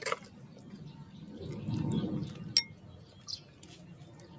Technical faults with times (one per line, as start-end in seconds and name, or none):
0.00-4.39 noise suppressor applied to music or sounds